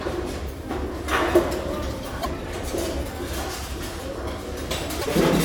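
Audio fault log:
2.21–2.26 s and 5.00–5.06 s, broken MP3 bit reservoir: abrupt jump, then a chirp, noise burst or short hole spanning about two 26.1 ms frames, likely from frames missing borrowed reservoir data.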